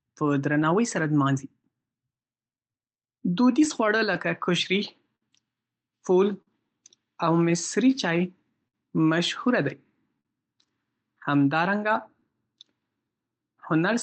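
Right from the start there's clock drift between sender and receiver. The far end's clock runs roughly 4% slow, so the jitter buffer keeps draining and the receiver has to stretch the speech to avoid running dry. You feel it as a slightly dragging, uneven pace.

From 0.22 s to 13.81 s you get the repeated timing corrections that come out of that. The receiver keeps repeating tiny slices, playing things at about 98% speed and adding roughly 300 ms overall. They come in unevenly spaced, so the tempo wobbles a bit.

On top of that, between 0.63 s and 10.27 s there are scattered short gaps: around fifteen lost or late packets, each patched by smearing the last bit of sound forward. The longest is about 50 ms, and they show up as little ticks and hiccups through the Opus call audio, which tops out around 8 kHz.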